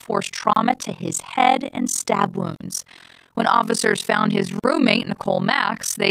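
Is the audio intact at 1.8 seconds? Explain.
No: overlap-add ripple runs throughout, frames summing unevenly so level dips about 60 dB around 40 times a second, a fast flutter seen as regular vertical striping.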